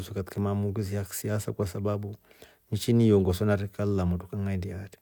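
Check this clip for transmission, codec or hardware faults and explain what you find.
No transmission, codec or hardware fault turns up anywhere in this speech recording.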